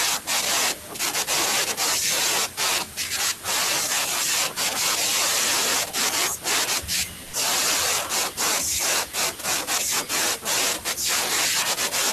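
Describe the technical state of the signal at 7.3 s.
Sound dropped by the voice detector, from 7.23 to 7.33 s: for about 100 ms the speech is missing and comfort noise stands in for it. The likely cause is the sender's voice activity detection misjudging quiet speech, a word ending or another sound as background and halting transmission, a pattern that fits Opus discontinuous transmission. The receiver fills the gap with generated noise rather than real signal, so the speech briefly gives way to that filler before resuming when the detector triggers again.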